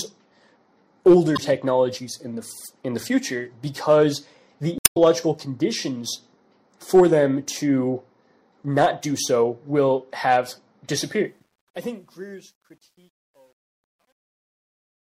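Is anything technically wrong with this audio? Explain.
Yes, there are two kinds of problems. There's damaged data in the compressed stream at 1.35 to 1.39 s and again at 4.77 to 4.97 s. Corrupted frames throw the decoder off, so it loses sync and hunts for the next header. You get short squawky blips, and the second one also adds about 4 ms of extra time.

Then there's truncation distortion on the fade-out, from 11.24 s to the end. The fade itself starts around 11 s and goes down to 15.14 s, but the level stage keeps only about 10 bits with no dither. From 12.28 s onward the quiet tail turns gritty.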